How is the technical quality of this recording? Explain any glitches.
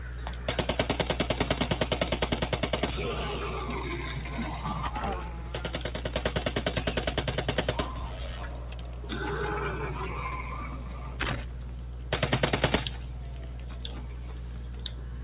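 The recording has one fault running throughout. It arrives over a call path whose band stops at 4 kHz, consistent with G.711 mu-law.

Noise suppressor applied to music or sounds: throughout the clip, a speech-oriented suppressor treats sustained tones and tails as noise, ducking them by around 5 dB while attacks pass, so the sound pumps and thins.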